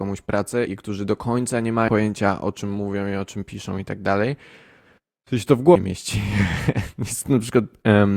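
At 1.87 s, between "którzy do końca nie" and "o czym mówią i", the speech jumps ahead by about 150 ms. At 5.74 s, just after "to w", it jumps again by about 200 ms. Both are compressed frames skipped: blocks of coded audio never reach the output, which fits runs of roughly ten frames each.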